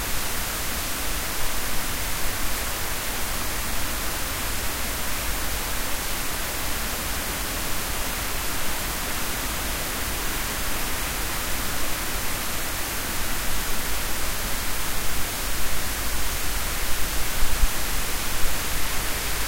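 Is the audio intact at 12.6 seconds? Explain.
No. From 12.51 to 12.62 s the sound has frames out of order. Two neighbouring 52.2 ms blocks, which fits two frames each, were decoded in swapped order. The stretch flutters and garbles. No time is lost.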